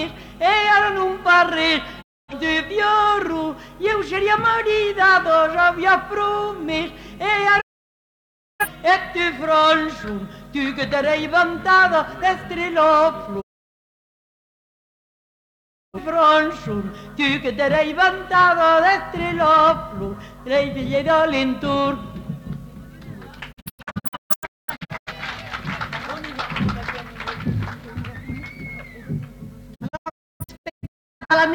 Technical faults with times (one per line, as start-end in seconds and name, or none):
2.01-2.34 digital broadcast dropout
7.60-8.66 digital broadcast dropout
13.40-15.99 digital broadcast dropout
23.51-25.12 digital broadcast dropout
29.74-31.35 digital broadcast dropout